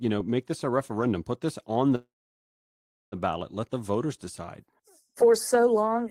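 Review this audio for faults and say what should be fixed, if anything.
Call audio freeze, 1.95 to 3.15 s: after "referendum put this on", the sound stretches into a brief fading tail, then about 1.04 s of silence, before "ballot let the voters" resumes intact, now about 1.17 s late. The likely cause is delayed packets draining the jitter buffer. An adaptive jitter buffer with more headroom, plus a steadier network path, would prevent this.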